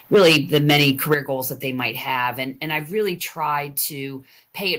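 Microphone overload runs from 0.13 to 1.14 s in this speech recording: the loudest syllables crackle harshly because their peaks are flattened, with around 7 percent of samples sheared off. The likely cause is an input level pushed about 10 dB past the converter's ceiling. A microphone volume stepped down follows at 1.14 s, just before "goals that they might": the voice and background fall abruptly by about 9 dB together, most likely the call software reacting to that clipping by cutting the device's input volume in a single step.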